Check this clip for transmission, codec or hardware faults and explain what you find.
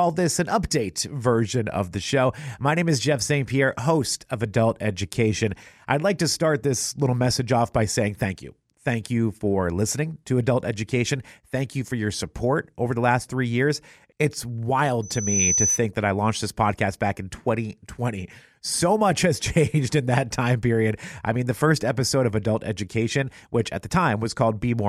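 There's one fault: a loudspeaker feedback squeal from 15.02 to 15.8 s. A mic is picking up the speaker it feeds, and around 6 kHz the loop gain tops one, so that frequency keeps feeding itself. You hear a thin, piercing tone swell up over roughly 0.4 s until it sits a few dB above the speech, about 5 dB, then it stops at 15.8 s.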